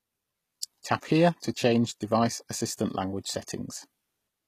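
Speech runs through the whole clip with plainly audible HE-AAC compression damage. Nothing sounds above 14.9 kHz. The treble is synthetic, and s sounds turn gritty and metallic. That likely comes from band replication copying lower bands upward, which fits a bitrate near 20 kbps.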